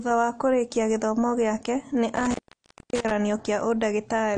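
A lossy codec has thrown away spectral detail throughout the speech, most likely AAC compression at a low bitrate around 32 kbps. Nothing survives above 10 kHz, so the sound is dull and smeared, with a plainly audible warbling, fizzy texture on sustained sounds and sibilants.

From 2.16 to 3.12 s an intermittent contact, like a loose cable or plug, breaks the signal path. The audio drops out for about 0.59 s in total, with crackle where the connection opens and closes and faint hiss in between.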